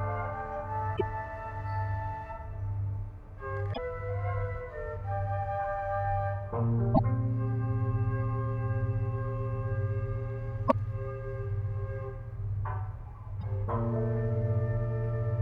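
You'll hear five short glitches from damaged data in the compressed stream: 0.93–1.01 s, 3.70–3.78 s, 6.91–7.00 s, 10.65–10.73 s, and a shorter one at 13.41–13.43 s. The first four last about 80 ms each. In each spot, some of the encoded bytes are corrupted, so the decoder misreads those frames and loses sync until it finds a clean frame header again. What comes out is a brief chirp, squawk, click or short hole breaking into the sound.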